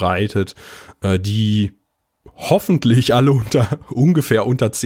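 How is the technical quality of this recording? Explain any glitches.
The recording has a faint, recurring unsteadiness in its timing, caused by clock drift between sender and receiver that forces repeated timing corrections.

Throughout the speech, the pacing feels slightly uneven, with small hiccups at irregular moments rather than a smooth flow. The cause is clock drift between sender and receiver. The sender's audio clock runs about 2% slower than the receiver's, so the receiver consumes samples faster than they arrive. Its jitter buffer keeps draining and needs constant topping up to avoid running dry.

From 0.24 s to 4.55 s, that shortfall is covered by repeated timing corrections. The receiver repeatedly duplicates short slivers of the speech, all in the same direction and at uneven spacing, which effectively plays the audio at 98% speed. Across the stretch these insertions add roughly a tenth of a second. 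Each one is tiny, so they come across as slight stumbles or a wobbly tempo rather than obvious repeats.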